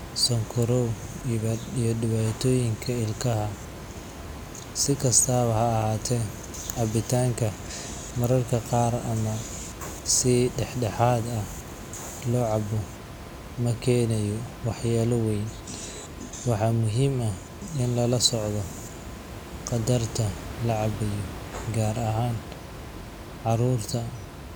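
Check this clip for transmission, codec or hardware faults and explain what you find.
Nothing in the speech points to a transmission, codec or hardware problem; the background noise, about 13 dB below the speech, is the room itself picked up by the microphone.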